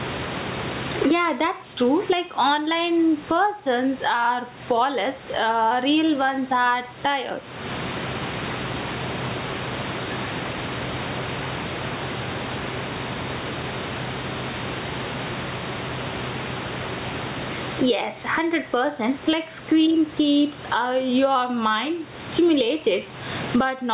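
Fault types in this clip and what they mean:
Gain pumping: The level breathes constantly, a swing of about 25 dB. Loud and soft parts sit squashed together. The likely cause is excessive input gain, with a fast limiter clamping every peak.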